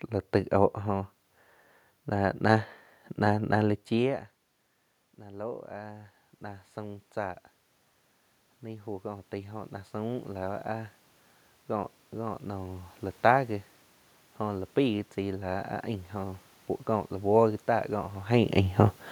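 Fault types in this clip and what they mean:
Automatic gain rising: the input drops by about 20 dB near 5.18 s, so the gain control eases its level up by about 5 dB until 7.46 s, then again from 8.62 to 10.98 s, with speech and room noise swelling together.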